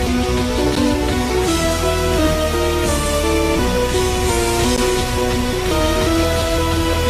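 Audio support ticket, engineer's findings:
Gap between stream segments at 0.75 s and 4.76 s. Hard-edged silent holes, about 10 ms and 13 ms. Spaced 4 s apart, matching 4-second segment boundaries. Packager/player timestamps leave a small gap, which is filled with silence. No audio content lost.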